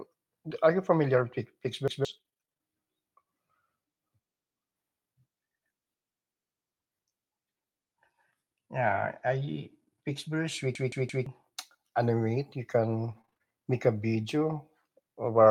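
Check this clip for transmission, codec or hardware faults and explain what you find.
The clip has four kinds of transmission fault in five places.

Repeated packet loss (robotic sound), 1.15 to 2.61 s, just after "are you": twelve holes, up to 42 ms each, were bridged by extending the last sound, about 260 ms in all. The result is choppy and robotic.

Repeated buffer, 1.88 to 2.05 s and 10.75 to 11.26 s: late audio made the device replay a 171 ms block, which fits an 8192-sample buffer. It plays once extra at 1.88 s and three times extra at 10.75 s, heard as hard-edged stutters.

Lost packet rebuilt from error correction, 8.75 to 9.49 s: 19 separate lost packets were replaced by low-bitrate copies carried in later ones, covering 380 ms. There is no gap, but the sound is rougher and noisier.

Scattered short gaps, 13.09 to 14.57 s: about five brief losses, the longest around 20 ms, were patched by continuing the preceding sound. 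They are heard as small ticks and hiccups.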